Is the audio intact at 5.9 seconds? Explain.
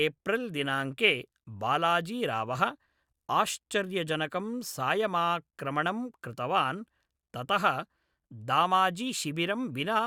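Yes, at 5.9 seconds the speech plays through intact, with no audible dropout, click, distortion or other fault at that moment.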